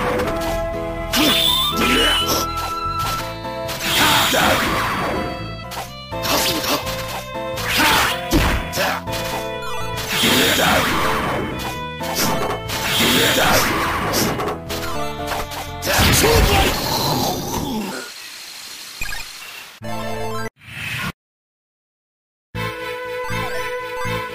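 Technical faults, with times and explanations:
17.92–19.42 s, section at the wrong speed: for about a second and a half the sound lurches upward and hurries, running roughly 1.55 times too fast, so everything in that stretch rises by about seven semitones and its timing tightens in step. Because pitch and pace shift together and snap back at 19.42 s, the likely cause is that this piece was played out against the wrong clock, as a mismatched playback or editing rate would do.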